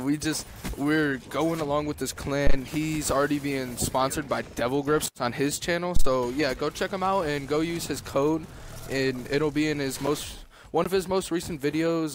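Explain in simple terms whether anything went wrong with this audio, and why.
A supply feeding the microphone input, most likely its phantom power, was switched on or off twice while the input was live. Each sudden voltage change jumped through the input's coupling capacitors and came out as a phantom power thump: a deep, dull knock, heard from 2.47 to 2.56 seconds and again from 5.96 to 6.09 seconds, each one fading away within a few hundredths of a second.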